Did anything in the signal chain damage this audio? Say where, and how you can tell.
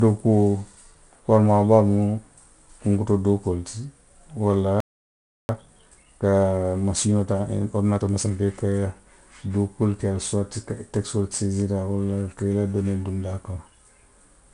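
Yes. The codec stage left 4-bit ADPCM compression across the whole clip. Every louder stretch of speech carries a gritty hiss that rises and falls with the level, and sharp onsets distort where the coder's step size can't adapt fast enough. The encoder predicts each sample and stores only a coarse 4-bit correction, so the error rides the signal.

At the playback stage, the output drops to silence from 4.80 s to 5.49 s, a gap of about 0.69 s in the middle of the speech, after which it resumes. The player was most likely starved of data or had its audio thread blocked, so the buffer ran dry and nothing reached the output until it recovered. This is a playback stall, and the hard, clean silence places it at playback.

Immediately after the stall, from 5.49 s to 8.49 s, the speech runs about 1.15 times faster than normal while its pitch stays where it was. This is time-compressed catch-up, also at the playback stage. 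The player works off the backlog built up during the gap by dropping short slices of audio and cross-fading over the joins, which shortens the timeline without shifting pitch.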